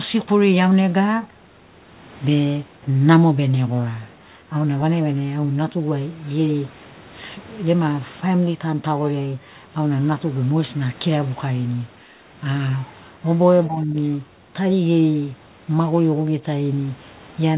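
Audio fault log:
13.67–13.96 s, speech suppressed in double talk: speech drops by around 20 dB for 0.3 s, likely from echo cancellation turning down overlapping talk.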